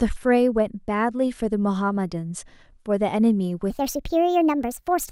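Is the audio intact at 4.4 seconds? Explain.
No. From 3.70 s to the end, a wrong sample rate plays the speech back about 1.38 times too fast, as if 32 kHz audio were run at 44.1 kHz, so it sounds hurried and about 5.5 semitones high.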